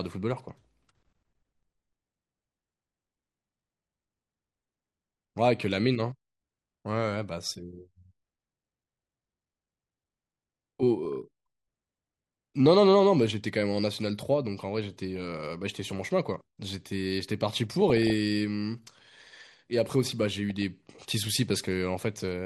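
Throughout, the speech sounds dull and granular, with gurgling in the upper bands. This is MP2 compression, likely at a low rate near 80 kbps.

DAB burbling breaks in at 0.33, 8.59, 11.05, 15.05, 17.9 and 20.5 s. Sparse bit errors put short blips of noise in single sub-bands.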